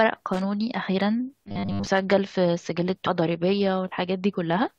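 From 0.34 to 0.41 s the speech breaks into an irregular burst of loose connector crackle: a worn or dirty contact making and breaking as it shifts, chopping the signal with scratchy pops. Its random, uneven texture separates it from steady digital clicking.

Between 1.47 and 1.88 s the speech takes on a rigid, metallic robotic sound, a fixed 100 Hz buzz that still roughly tracks the syllables. This is likely from repeated short buffers, replaying about 10 ms chunks across most of that stretch; unlike crackle, its pitch stays constant.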